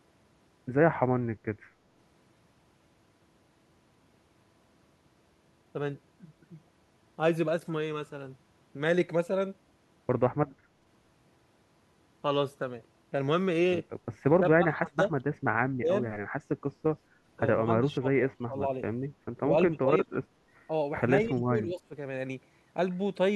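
The speech sinks in level and thins out in patches between 14.29 and 15.12 s, 15.79 and 15.91 s, 17.84 and 18.69 s, 19.7 and 20.07 s, and 21.25 and 21.94 s. The deepest dips reach about 25 dB and the last one is milder. This is likely speech suppressed in double talk: with both ends talking at once, the echo canceller mistook the talker for loudspeaker echo and pulled the level down.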